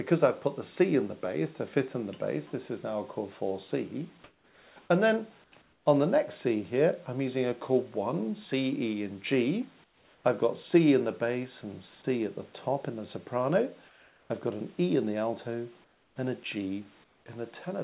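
At 4.24 to 4.76, 5.44 to 5.52, 5.62 to 5.86, 9.84 to 10.24, 13.88 to 14.3, 15.84 to 16.16 and 17.04 to 17.26 s, comfort noise replaces the background. In these pauses the real background gives way to a steady, featureless hiss about 3 to 8 dB quieter, likely because the sender stopped transmitting during quiet stretches. Unlike a dropout, these gaps are filled with noise rather than silence.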